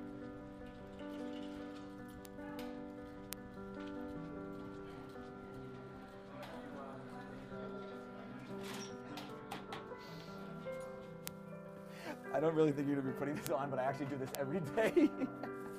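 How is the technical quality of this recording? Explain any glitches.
The recording has five isolated clicks, all bit error spikes, at 2.25, 3.33, 11.28, 13.47 and 14.35 s. In each, a single sample jumps by a power of two when a flipped bit corrupts its stored or transmitted value, then returns at once. The first peaks at about −22 dBFS, the others at about −10 dBFS. Each is a sharp, broadband tick unrelated to the surrounding sound, unlike an edit click, which follows a waveform discontinuity at a splice.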